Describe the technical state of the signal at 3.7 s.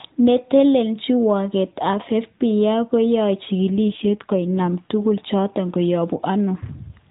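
At 3.7 s the speech is right at the start of an AMR rate drop that runs from about 3.68 to 4.68 s, ending just before "tuguk choton". The codec steps down to a lower mode to free up bits for error protection, and the roughness fits a move from 12.2 kbps to around 5.9 kbps. The bandwidth stays the same and nothing drops out, but for that second the speech turns buzzier and more synthetic than the lightly coded AMR-NB around it.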